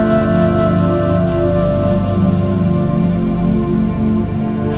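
No technical faults can be heard anywhere in this clip.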